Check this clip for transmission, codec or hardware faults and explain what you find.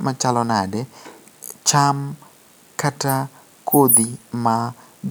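No fault turns up anywhere in this speech recording. There is nothing to report for any part of the signal chain.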